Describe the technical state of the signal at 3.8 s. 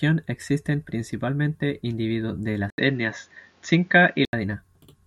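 Input switched to a poorer device, 2.70 to 4.33 s: the likely cause is a capture change that cuts everything above 7 kHz, after an 80 ms gap, so the speech turns dull over faint new background noise.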